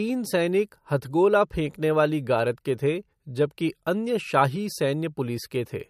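Throughout the speech, the audio was likely passed through MP3 compression at a low bitrate, which fits about 54 kbps. Starved of bits, the encoder removes everything above 15.2 kHz and zeroes weak frequency lines frame to frame, leaving plainly audible watery swirl and metallic chirps on s sounds.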